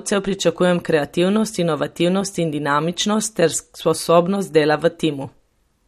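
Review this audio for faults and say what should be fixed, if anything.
Plainly audible MP3 compression throughout, likely from a low bitrate around 48 kbps: watery swirl on sibilants, and the spectrogram shows a hard shelf with nothing above 13.9 kHz. Re-export from the original source at a higher bitrate or in a lossless format.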